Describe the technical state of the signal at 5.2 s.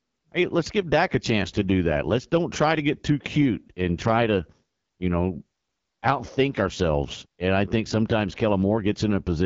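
At 5.2 s it's the same AMR wideband (HD Voice) coding heard throughout: rough, raspy speech with nothing above 7.5 kHz, which fits a low rate around 8.85 kbit/s.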